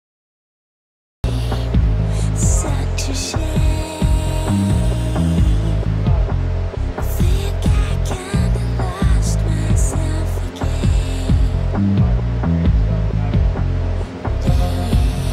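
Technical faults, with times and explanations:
0 to 1.24 s, cut-off start: the opening is pure digital silence, then at 1.24 s the sound drops in already mid-flow, with no attack or fade-in. The capture began late and caught it partway through, so that entry feels abrupt and clipped off.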